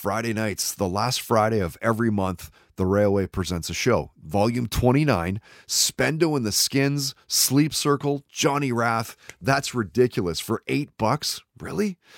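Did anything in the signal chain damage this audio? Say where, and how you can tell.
No, the signal chain doesn't seem to have damaged this speech anywhere along the way, since nothing in what you hear points to a problem at any stage.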